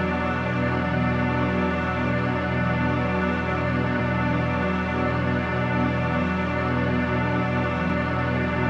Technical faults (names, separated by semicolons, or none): audio missing between chunks